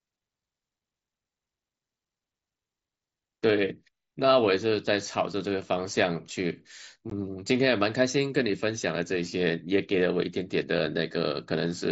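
At 7.10 s, unconcealed Bluetooth headset packet loss cuts a hole of about 15 ms, which fits two lost packets, into the speech carried over the mSBC headset link. Nothing fills the gap, so the speech stops abruptly and restarts just as abruptly. A concealed loss would instead smear or repeat the preceding sound.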